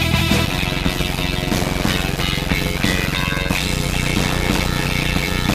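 From 0.45 s to the end, the audio carries a steady buzz at about 92 Hz and plays at roughly 0.53 times normal speed, yet keeps its normal pitch. This is a block size mismatch (padded): each block is written short and the remainder filled with silence, which fits 256-sample writes into 480-sample reads. The pitch holds, and that rules out a sample-rate error. The gaps repeat at exactly the block rate, which rules out random dropouts.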